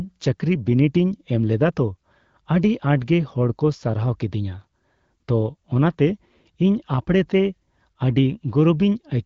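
No technical faults are audible anywhere here.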